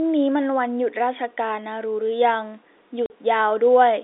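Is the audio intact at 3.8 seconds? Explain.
Yes, the speech at 3.8 seconds comes through intact, with no dropout, click or distortion at that moment.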